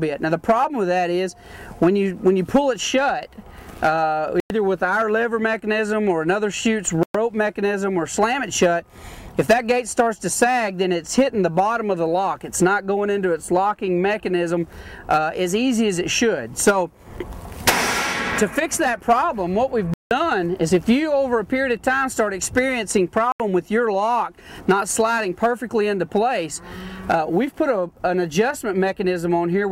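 The audio drops to complete silence four times: at 4.40 to 4.50 s (about 101 ms), 7.03 to 7.15 s (113 ms), 19.94 to 20.11 s (173 ms) and 23.32 to 23.40 s (78 ms). The likely cause is a Bluetooth stall, where delayed wireless packets let the headphones' buffer run empty so playback halts until data arrives again. On a waveform each gap is a flat line, and on a spectrogram it is a clean blank vertical band across all frequencies.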